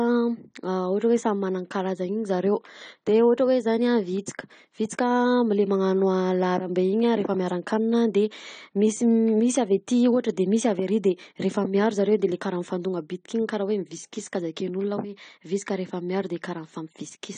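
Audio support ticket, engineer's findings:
Whole clip: speech band-limited, nothing above 9 kHz, codec damage plainly audible throughout. Likely AAC compression (AAC-LC): frequency lines quantised coarsely against a hearing model, top band discarded. Consistent with a low bitrate around 32 kbps.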